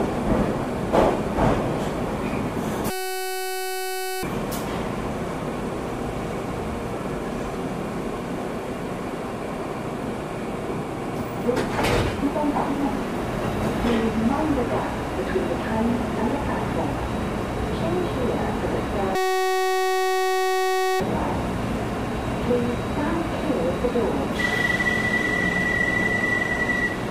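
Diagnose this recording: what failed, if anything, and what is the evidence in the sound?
A system hang loop at the driver or buffer stage: at 2.90–4.23 s and 19.15–21.0 s the system froze while the hardware kept replaying one 2.67 ms slice, which fits a 256-sample buffer. The result is a steady 375 Hz buzz: flat harmonic lines on a spectrogram, identical repeating cycles in the waveform.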